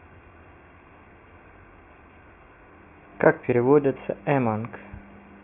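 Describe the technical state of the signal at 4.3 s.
At 4.3 s the speech signal is intact, with no dropout, distortion, glitch or other audible fault at that moment.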